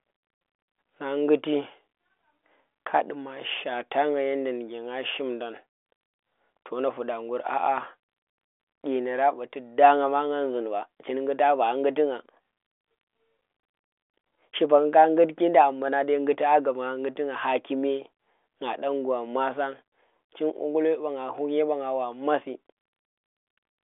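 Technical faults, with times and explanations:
No technical faults can be heard in this clip.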